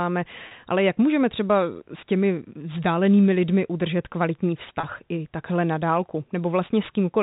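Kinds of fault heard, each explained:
Packet loss with pitch repetition: the receiver covered missing audio by repeating the last pitch period, so at 0.48 s and 4.80 s the speech briefly holds a slightly buzzy tone for 30 ms, fitting one lost packet each, rather than falling silent or clicking.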